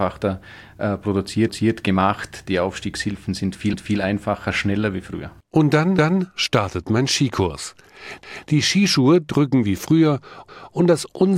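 Speech with overlapping chunks: a quarter-second of sound replays at 1.48, 3.73 (before "einfacher schneller wie früher"), 5.98, 8.23 and 10.48 s, every 2.25 s, as 2 s chunks restart 250 ms early. Unlike a dropout, nothing is lost; the material stutters twice.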